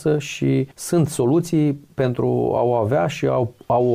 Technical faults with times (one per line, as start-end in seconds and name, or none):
none